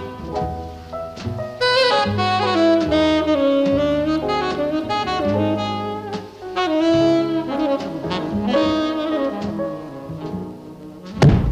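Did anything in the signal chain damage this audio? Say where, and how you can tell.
No, nothing in the signal chain damaged this audio.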